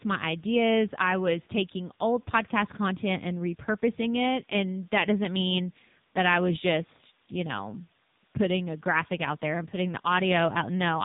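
Speech here has been run through the AMR narrowband mobile codec for its whole length, at a low rate: the sound points to around 6.7 kbps, one of AMR-NB's lower modes. The codec rebuilds the voice from a vocal-tract model fed with only a few pulses per 5 ms subframe, so at this rate the damage is heavy, leaving a buzzy, synthetic quality, while the narrowband path cuts everything above about 3.8 kHz, making the voice sound boxed-in and telephone-like.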